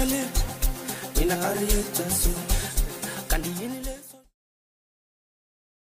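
No technical faults can be heard in the signal, and the level eases down in an editor's smooth fade-out from around 3 seconds until it ends at 4.36 s.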